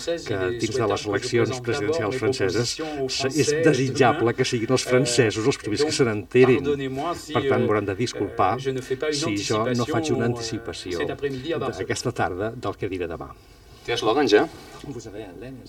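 From start to finish the sound carries channel delay (comb filtering): one channel runs roughly 3 ms behind the other, and when the two are folded to mono the shared content cancels at evenly spaced frequencies, the first notch sitting somewhere around 200 Hz. The result is a hollow, phasey, slightly boxy tone. Unlike flanging, the notches never sweep; unlike a plain low-pass, the loss is a regular series of dips rather than a smooth top-end roll-off.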